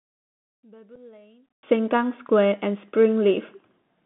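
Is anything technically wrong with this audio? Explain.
Yes. Throughout, the speech passes through a Bluetooth CVSD headset codec, using adaptive one-bit delta steps on a band limited to about 150 Hz–3.5 kHz, fitting a 64 kbps link, leaving scratchy sibilants and granular hiss.

From 0 to 1.63 s, one channel is likely inverted, so the mono sum cancels the centred voice, dropping it by about 31 dB to a faint residue.

At 0.96 s, unconcealed Bluetooth headset packet loss removes about 7.5 ms, a couple of packets, leaving an abrupt hole in the speech.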